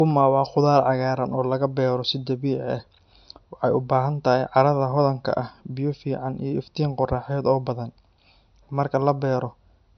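From start to end, the speech has nothing above about 6.1 kHz and carries the smeared, swirly texture of heavy MP3 coding, which fits a first pass near 48 kbit/s. This is likely low-bitrate audio saved at a high bitrate: the clean, high-bitrate re-encode restores nothing, unlike a genuine high-bitrate file.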